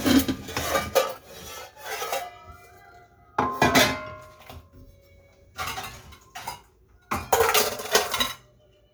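No technical faults are audible.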